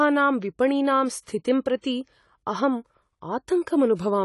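From start to finish the speech is dull and plainly damaged, with nothing above 11.4 kHz. This is likely AAC compression at a low bitrate, around 32 kbps. Unlike a simple low-pass filter, coarse quantisation smears the remaining band, not just the top.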